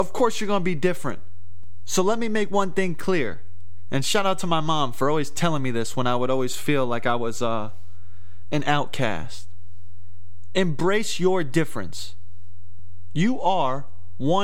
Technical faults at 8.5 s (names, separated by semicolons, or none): DC offset